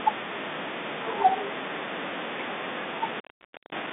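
From 2.92 s to the end, an intermittent contact drops the speech for about 0.52 s with edge crackle and faint hiss, showing as a near-flat waveform gap framed by vertical spectrogram clicks.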